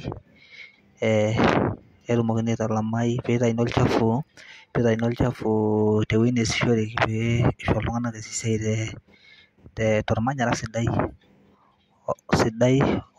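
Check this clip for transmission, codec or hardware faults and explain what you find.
Nothing in this speech recording points to a transmission, codec or hardware problem, so there's nothing to flag here.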